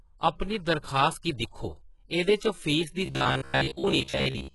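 From the start the speech sounds gritty and lispy, with metallic s sounds. The likely cause is heavy HE-AAC compression, which rebuilds the treble by copying lower bands upward. The damage points to a bitrate of around 12 kbps.

From 3.06 s to 4.54 s the sound hardens into a rigid, metallic buzz at 66.8 Hz that still loosely follows the speech. This is robotic sound from repeated short buffers. A slice of about 15 ms is likely being replayed in place of most of the real audio.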